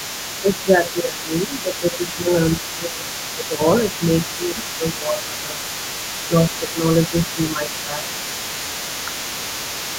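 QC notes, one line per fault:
Throughout: other side's voice leaking through. A second voice sits under the speech for the whole clip, roughly 15 dB below it. This is likely loudspeaker playback reaching the microphone and not fully removed by the echo canceller, so the remainder rides along with the speech.
0.41–3.61 s, 3.92–5.59 s, 6.29–8.07 s: speech suppressed in double talk. The speech dips in level in pieces, by up to about 15 dB in the first stretch and about 10 dB in the later two. In total the drops last about 2 s, 1.5 s and under a second. This is likely the echo canceller ducking both voices when they overlap.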